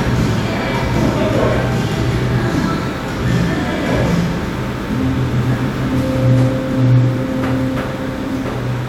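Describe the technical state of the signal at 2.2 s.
At 2.2 s the signal is intact, with no dropout, distortion or other fault.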